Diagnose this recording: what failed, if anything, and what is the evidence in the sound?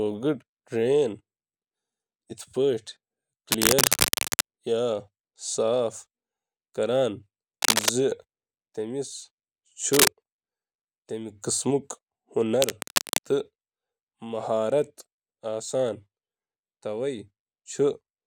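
Cable scratch noise at 3.51–4.41, 7.62–7.89, 9.93–10.09 and 12.61–13.19 s, likely from a worn analogue connector whose contact resistance jitters. It shows as ragged broadband spectrogram smears near speech level.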